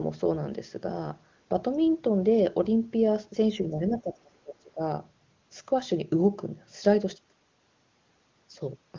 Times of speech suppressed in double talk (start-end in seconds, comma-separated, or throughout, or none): 3.70-4.81